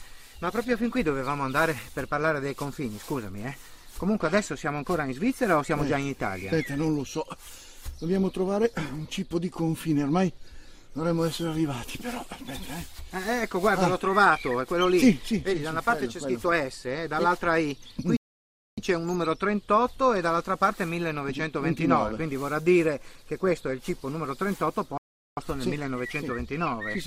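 At 18.17 s the sound cuts out mid-flow and the output goes silent for about 0.61 s, resuming at 18.78 s; it happens again from 24.98 s to 25.37 s, a gap of about 0.39 s. Both are playback stalls. The likely cause is the player running short of data or having its output thread held up, so nothing reached the output until it caught up and carried on.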